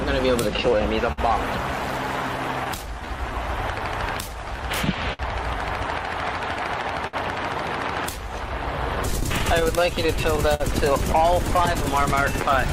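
Clock drift between sender and receiver runs through the whole clip. The sending clock runs roughly 4 percent slow, so the receiver's jitter buffer keeps draining. Small timing hiccups recur at uneven intervals throughout.

Repeated timing corrections run from 0.32 to 12.04 s. To stay in step, the receiver keeps repeating short pieces, all in the same direction, slowing playback to about 98 percent and adding roughly 200 ms in total. The result is a faintly unsteady, dragging tempo.

A short stall from a late packet occurs at 1.12 to 1.19 s. The packet arrived late, so the receiver held the last sound for 55 ms until it came, then carried on from the same point. Nothing is lost, but one moment lingers with a slight buzz or dip.

Scattered short gaps appear between 2.37 and 2.86 s. About three packets arrived late, each patched by continuing the last sound, with about 20 ms filled altogether and no gap longer than about 10 ms. 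They are heard as faint ticks or smears in otherwise continuous audio.

Another short stall from a late packet comes at 5.13 to 5.21 s. The buffer ran empty again and the receiver stretched the preceding sound by 59 ms before resuming where it left off. This is heard as one brief held moment, with a slight buzz or dip.

Repeated stalls, a stutter, occur from 6.55 to 7.15 s. Packets arrived too slowly three times, and each time the receiver extended the last sound, for 77 ms in all, the longest 63 ms. About 13 percent of the stretch is filled, so it audibly catches and drags.

Scattered short gaps return between 8.95 and 10.62 s. Roughly seven late packets were each bridged by continuing the previous sound, adding around 100 ms, with the longest gap near 50 ms. The result is a scatter of brief hiccups and smears across this stretch.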